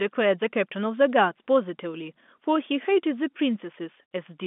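No technical faults are audible.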